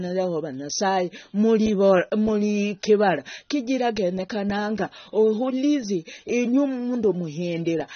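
From start to finish the speech has no content above about 6.3 kHz, so it sounds dull and boxed-in, and the codec damage is plainly audible as a smeared, warbling texture on sustained sounds and a fizzy edge on sibilants. This is likely AAC compression (AAC-LC) at a low bitrate: the encoder lowered its cut-off and starved the upper bands of bits. The band limit and artefact level fit a rate of around 24 kbps.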